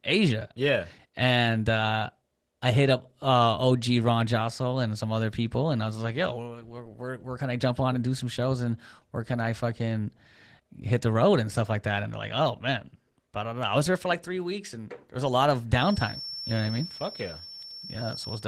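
Throughout the speech runs through Opus voice compression, and the damage is plainly audible: voices come out hoarse and a little robotic. The sound points to the hybrid mode at a low rate, which fits roughly 16 kbps: linear-prediction coding below 8 kHz with a thin transform layer above it. On a spectrogram the band up to 8 kHz looks smeared and coarse, the region above it patchy and blotchy, with texture changing in steps of about 20 ms.

From 15.71 s to the end a feedback whistle sits behind the speech: a thin, steady tone at 5.4 kHz, well below the voice level, around 15 dB down, swelling and fading slowly in loudness without building up. The likely cause is a loudspeaker-to-microphone loop held just short of runaway, so one frequency keeps ringing. A spectrogram shows a single bright horizontal line at 5.4 kHz across those last seconds. The waveform barely changes, since the tone is buried under the speech.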